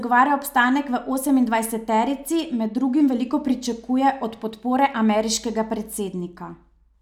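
No technical faults can be heard anywhere in the recording, and the signal holds steady throughout.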